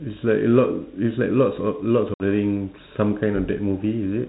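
At 2.14 s the speech drops into a hard-edged 60 ms hole, ending near 2.23 s, then resumes with some distortion. This is packet loss on an ADPCM call: a few packets vanished, leaving the 32 kbit/s G.726 decoder's predictor and step size briefly out of step.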